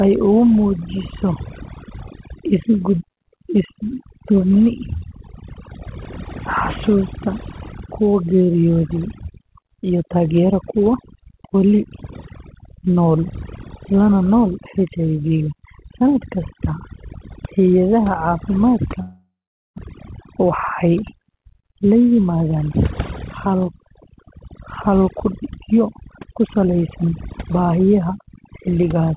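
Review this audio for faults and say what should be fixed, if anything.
Overdone noise removal runs through the whole clip. The noise reduction was set too aggressively. It pulls individual frequency bands down whenever they sit near its noise estimate. Quiet parts of the speech get removed along with the noise. The background drops and breaks up into twinkling specks. The speech is already band-limited to nothing above 4 kHz by the G.711 call path. To prevent it, lower the suppression strength or apply it before the signal is this noisy.

From 19.02 to 19.80 s, the audio breaks up in a way that points to a long network dropout as the likely cause. The receiver stretches the last sound into a fading buzz or hiss. For about the final 450 ms, only silence remains. Roughly 600 ms of audio never plays at all. Speech resumes afterwards with that section missing, and the delay has shifted by around 150 ms. 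To prevent it, improve the network link or add packet redundancy.

From 20.18 to 22.20 s, a jitter buffer speed-up follows the dropout. After the gap, the buffer held more audio than its target. To shed the excess delay, the receiver cut many short pitch-period slices in a row, around 150 ms in total. Playback runs at 107% speed with unchanged pitch. The speech sounds hurried through this stretch. To prevent it, let the buffer drain more gradually after a burst of late packets.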